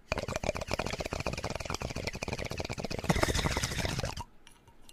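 Everyday sounds, with a regular tick every 1.23 s from 1.14 to 4.84 s, about four in all, likely clock drift buffer slips from a few hundred ppm mismatch dropping or repeating small sample blocks.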